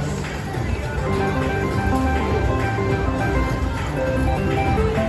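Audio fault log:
Nothing here needs flagging; I listened all the way and heard no technical faults to log.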